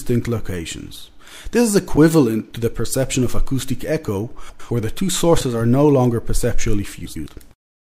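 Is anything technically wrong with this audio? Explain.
Yes. Frames out of order at 4.49 to 4.71 s and again at 7.05 to 7.27 s. In each spot, two adjacent blocks of about 105 ms were decoded in swapped order, which fits runs of four frames each. The stretch plays with its halves exchanged, so the sound briefly turns into a garbled flutter. No time is lost, and the timing after each swap stays intact.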